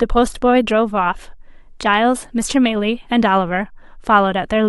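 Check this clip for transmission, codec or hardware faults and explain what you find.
No transmission, codec or hardware faults can be heard anywhere in this speech recording.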